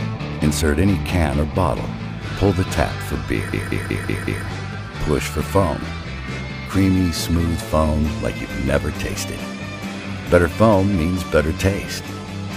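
At 3.53 s a system hang loop begins and runs to 4.46 s. The host or driver stalled while the sound hardware kept replaying its ring buffer, so one 186 ms slice repeats exactly five times at about 5.4 Hz, a machine-gun stutter. The loop length fits an 8192-sample buffer, and little or nothing is lost afterwards. Unlike packet-loss concealment, which fades or varies its repeats, every cycle here is identical and evenly spaced.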